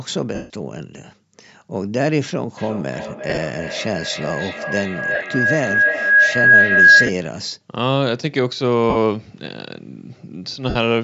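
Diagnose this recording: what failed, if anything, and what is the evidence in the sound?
The Bluetooth LE Audio link dropped frames six times, so the decoder had to conceal lost LE Audio frames. This happened at 0.35–0.50 s (the longest, 150 ms), 3.30–3.38, 5.15–5.24, 7.06–7.09, 8.90–8.96 and 10.69–10.76 s. The decoder repeats the last spectrum with scrambled phase, turning the speech into brief noisy smears that fade toward silence.

A feedback howl runs from 2.57 to 7.26 s. Two devices share the call in one room, so microphone-to-loudspeaker gain exceeds unity around the loop. The repeats, coming back roughly every 0.3 s, build into a tone near 1.5 kHz, peaking about 8 dB above the speech.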